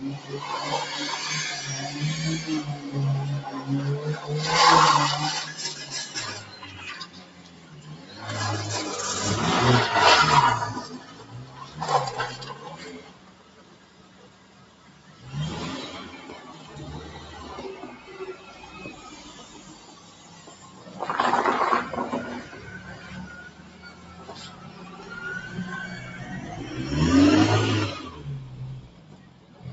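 A noise suppressor applied to music or sounds runs throughout, treating steady tones and decays as noise, so the level pumps and thins with swings of around 15 dB. Sound cut by the noise suppressor appears at 6.42–8.18, 10.99–11.78, 12.4–15.23, 19.4–20.89, 23.49–25.06 and 28.81–29.65 s, where sustained sound sinks by about 7 dB (about 6 dB at 19.4 s) and tails fade early.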